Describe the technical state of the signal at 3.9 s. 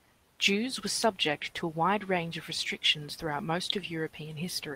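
At 3.9 s the signal is intact, with no audible fault at that point in the speech.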